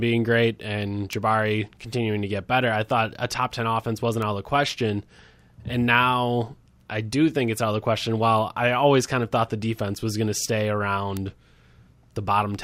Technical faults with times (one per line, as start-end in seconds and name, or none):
1.13 bit error spike
4.22 bit error spike
11.17 bit error spike